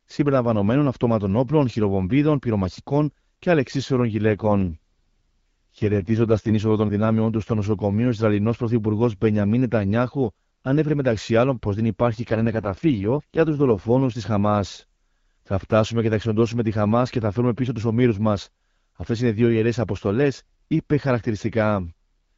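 A weakening radio link forces an AMR rate drop twice, pushing the wideband codec from what sounds like 12.65 down to about 6.6 kbit/s. The first runs from 4.27 to 6.53 s, after "χειροβομβίδων πυρομαχικών και αλεξίσφαιρων" and before "είσοδο των δυνάμεών του". The second runs from 12.12 to 14.0 s, after "μεταξύ άλλων πω δεν". Each time the speech turns rough, raspy and synthetic, with no gap and no loss of bandwidth.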